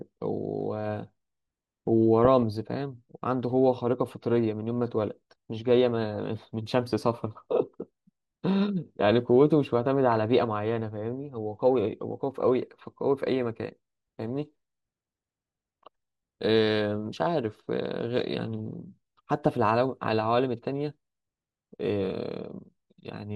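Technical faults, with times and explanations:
Throughout: MP2 compression, likely at about 80 kbps. Dull, gurgling speech; the spectrogram shows upper sub-bands blinking on and off, leaving a ragged, patchy top end.
2.25–2.43 s and 10.12–10.17 s: DAB burbling. Bit errors reaching the audio data put short blips of noise into individual sub-bands, heard as brief noisy blips and seen as isolated bright blocks on the spectrogram.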